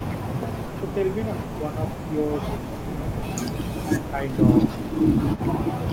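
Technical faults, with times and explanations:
0.00–1.62 s, 1.93–2.12 s and 2.57–5.86 s, echo leak: a faint copy of the speech trails it by 158 ms, about 20 dB down (about 25 dB in the middle stretch). This is likely a far-end loudspeaker whose echo canceller let part of the sound back into its microphone.
1.59–1.75 s, 2.70–3.27 s, 3.59–3.65 s, 4.11–4.21 s and 5.86–5.91 s, speech suppressed in double talk: the speech briefly dips by about 5 dB, up to about 10 dB at 4.11 s and 5.86 s, likely because the echo canceller confused overlapping talk with echo and attenuated both.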